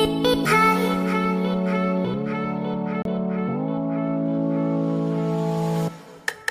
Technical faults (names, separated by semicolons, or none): CD skip